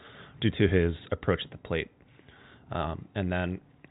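No technical faults are audible in the speech.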